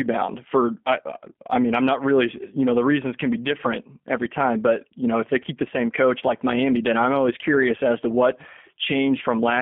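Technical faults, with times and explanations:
Throughout, G.729 codec: the speech is intelligible but rough and faintly synthetic, with a buzzy, grainy edge and nothing above about 3.4 kHz or below 200 Hz. The codec does not send the waveform. It models each 10 ms frame as a vocal tract filter, a pitch predictor and a few pulses, and rebuilds the voice from those at the far end. The plainly audible roughness fits an 8 kbit/s G.729A link.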